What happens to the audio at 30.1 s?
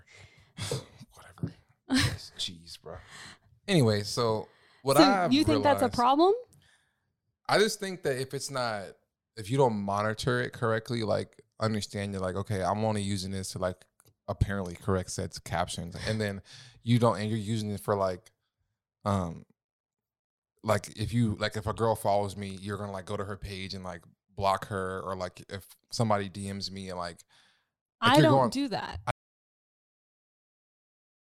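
An audio dropout to silence runs from 29.11 s to the end, likely from a lost input while recording continued; speech cuts off into dead silence without room tone.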